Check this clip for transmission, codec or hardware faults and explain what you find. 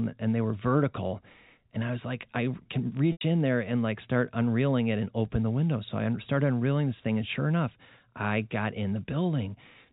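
One transmission fault is audible: packet loss with pitch repetition at 3.12 to 3.21 s, between "was like I can" and "in there and like". About 90 ms of audio went missing, consistent with three lost packets. The receiver looped the last pitch period to fill the gap, so a brief buzzy hold fades toward silence before the speech resumes through a short cross-fade. The clip is carried over G.711 telephone coding, which accounts for the band limit at 4 kHz.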